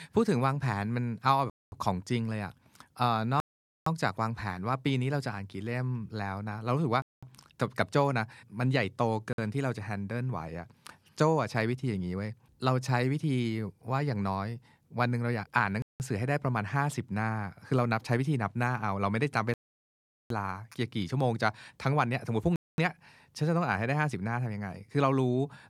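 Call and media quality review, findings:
Dropouts to full silence in speech at 1.50, 3.40, 7.02, 9.33, 15.82, 19.54 and 22.56 s, 0.05 to 0.77 s long, longest at 19.54 s; audio resumes mid-flow. Likely Bluetooth stall: link interference delaying packets, headphone buffer running dry until retransmissions arrive.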